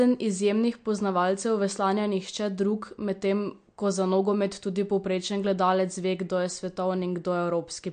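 The speech has likely been through MP3 compression at a low bitrate, around 48 kbps judging by the damage, and it holds for the whole clip. Short of bits, the encoder cuts the treble hard, so nothing is left above about 9.1 kHz, and weak frequency lines drop in and out from frame to frame. That leaves a plainly audible watery, swirling texture, chirpy s sounds, and softened attacks on consonants.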